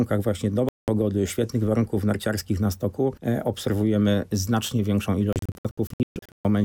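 A digital broadcast dropout hits at 0.69 to 0.88 s, where the receiver stops getting usable frames and mutes, so the sound cuts to a clean silence of about 0.19 s before resuming, with that stretch simply gone. A second dropout runs from 5.33 to 6.45 s and is broken rather than solid: several short holes, the longest about 0.13 s and together about 0.67 s, are scattered across that span as frames repeatedly fail and recover.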